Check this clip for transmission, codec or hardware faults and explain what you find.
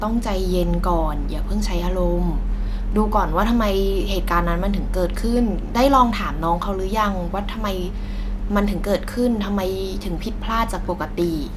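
Nothing in this speech clip points to a transmission, codec or hardware problem; there's simply nothing here to flag.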